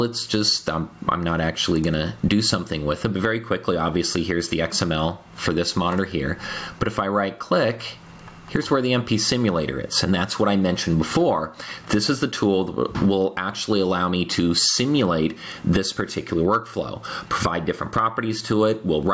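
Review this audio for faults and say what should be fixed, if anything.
Gain pumping runs through the whole clip. The swing is around 25 dB. The likely cause is input gain set far too high, with a fast limiter dragging each peak down. Loud and soft parts end up squashed together. To prevent it, lower the input gain so the limiter rarely acts.

A phantom power thump hits from 2.27 to 2.58 s. It is a deep, low thud that dies away in about 70 ms. A supply was switched on a live input. The sudden voltage step passed through the coupling capacitors into the signal. To prevent it, mute the channel before switching phantom power.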